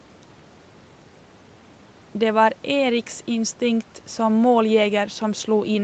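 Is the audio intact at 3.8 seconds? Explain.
Yes, the speech at 3.8 seconds is intact, with no dropout, glitch or other fault at that moment.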